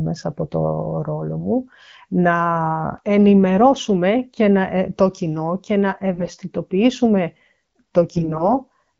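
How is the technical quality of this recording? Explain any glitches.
The recording has three short bursts of AMR bit errors, heard over wideband AMR coding that sounds consistent with 12.65 kbit/s.

AMR bit errors occur at 1.38–1.46 s, at 6.14–6.28 s right after "το κοινό και να", and at 8.12–8.49 s. Flipped low-priority bits misplace the excitation pulses and skew the fine pitch, gain and spectral values, turning the sound hoarse and gargly while level holds. On a spectrogram, harmonics smear into scratchy noise. The worst burst, near 10 percent, falls at 6.14–6.28 s.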